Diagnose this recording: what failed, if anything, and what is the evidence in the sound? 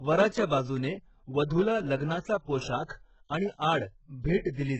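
The codec stage is where this went wrong: the whole clip has the heavy, gritty sound you'd expect from HE-AAC compression, likely pushed to a very low rate, something like 8 kbps. Nothing comes through above 8 kHz, and the treble that is there sounds synthetic, gritty and a bit lispy on the s sounds. That's spectral band replication: the top end is copied up from lower bands and roughly shaped, so its harmonics don't match the real ones.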